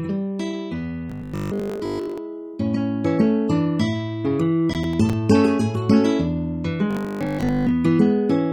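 From 1.10 to 2.18 s the sound becomes a rigid, metallic 50 Hz buzz. This is robotic sound from repeated short buffers, likely from 20 ms chunks being looped for most of that span. On a spectrogram it appears as evenly spaced harmonics 50 Hz apart. Between 4.73 and 5.13 s a burst of gritty processor overload crackle follows: several buffers of about 10 ms missed their deadlines and were left silent. The waveform shows brief flat gaps with hard edges, and the spectrogram shows thin vertical broadband streaks. From 6.91 to 7.71 s the same 50 Hz robotic buzz and harmonic comb return.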